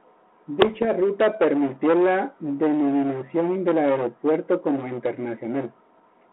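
From 0.62 to 0.86 s, just before "ruta permitió la denominación", the speech breaks into pops and rough bursts with brief level jumps. These are bit errors on an ADPCM link: flipped bits upset the 32 kbit/s G.726 decoder's step size and predictor, so each error rings on for milliseconds.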